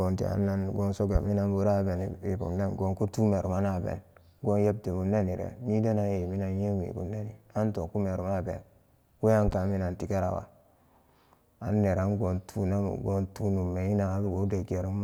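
Speech with two loud pops, likely electrical transients such as a plug, switch or static discharge: one sharp pop at 1.15–1.18 s, well above the speech, and a double pop at 9.48–9.55 s just before "minan tigarawa". Each shows as a tall, narrow waveform spike and a thin full-height vertical stripe on a spectrogram, with the speech continuing underneath.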